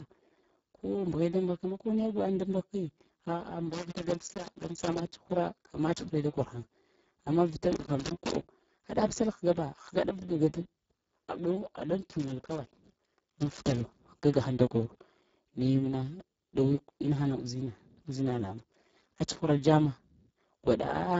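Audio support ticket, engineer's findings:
Speex codec, whole clip: hoarse, noisy, near-robotic speech, consistent with a very low-rate mode around 6 kbps. Spectrogram shows smeared harmonics, noise-like fill above 4 kHz, nothing above 7.7 kHz.

Loose connector crackle at 3.73–5.06 s (ends just before "tsuhra amma tsuhre da"), 7.73–8.36 s (starts right after "amma vita") and 12.2–14.0 s. A worn contact is chopping the signal. The waveform shows ragged spikes and dropouts, and the spectrogram shows broadband vertical streaks.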